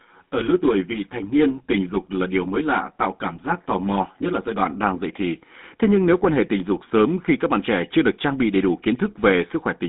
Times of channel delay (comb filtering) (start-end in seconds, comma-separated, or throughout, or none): 0.00-4.66